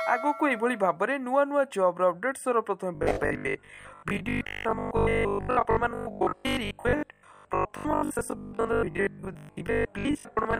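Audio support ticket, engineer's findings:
Audio input likely starved: new blocks arriving too seldom, playback filling gaps by replaying the last 20 ms segment while real audio is skipped. Robotic sound from repeated short buffers, 2.95 s to 10.59 s. Fixed 50 Hz buzz, one over the 20 ms loop length, across most of the sound in that span. Metallic, rigid texture that only loosely follows the original audio.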